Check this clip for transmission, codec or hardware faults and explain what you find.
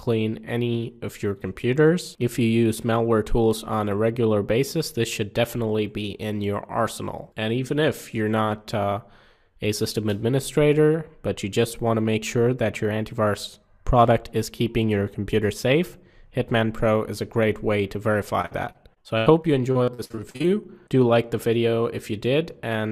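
One transmission fault appears near the end. From 18.41 to 20.46 s there is repeated packet loss (robotic sound): seventeen short holes, none longer than 80 ms, each patched by stretching the preceding sound. The result is a choppy stutter with pieces missing rather than one clean dropout.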